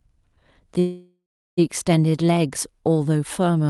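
A call audio freeze runs from 0.79 to 1.59 s. The speech stops and the last sound is stretched into a fading buzz that drops to silence for about 0.37 s; the likely cause is late packets draining the jitter buffer. Speech resumes exactly where it stopped, now 780 ms later, with nothing lost, through a path whose bandwidth, which fits Opus, reaches about 12 kHz.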